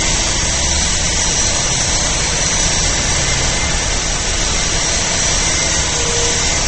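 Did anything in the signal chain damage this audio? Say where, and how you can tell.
Yes, at the codec stage, throughout the clip: likely MP3 compression at a low bitrate, which fits about 32 kbps. A spectrogram shows a hard ceiling at 8.4 kHz and weak bins blinking on and off between frames, heard as watery swirl and smeared attacks.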